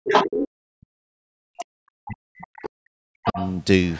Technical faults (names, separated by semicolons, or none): speech suppressed in double talk; other side's voice leaking through